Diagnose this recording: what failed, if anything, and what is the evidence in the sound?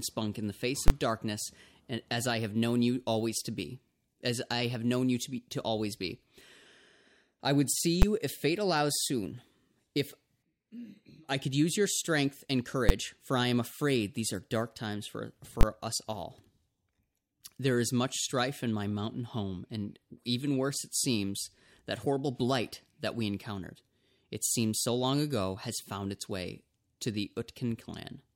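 Invalid numbers at full scale from a floating-point processing stage: loud bangs at 0.88–0.90, 8.02, 12.89 and 15.61–15.63 s, each a 10–20 ms flat slab far beyond the speech peaks on the waveform and a bright vertical stripe on the spectrogram.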